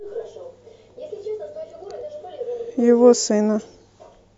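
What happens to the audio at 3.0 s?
Nothing goes wrong at 3.0 s; the speech carries on intact through that moment, with no dropout, click or other audible fault.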